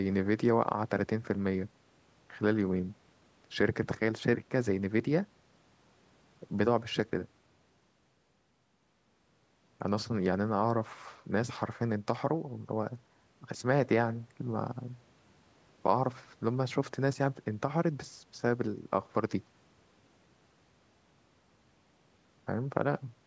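Nothing in this speech clip is technically wrong. It has passed through a call's microphone processing, which trims the lowest bass and leaves nothing above 8 kHz.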